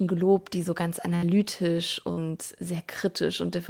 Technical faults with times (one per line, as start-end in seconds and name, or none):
1.15-1.25 burst of packet loss
2.12-2.20 burst of packet loss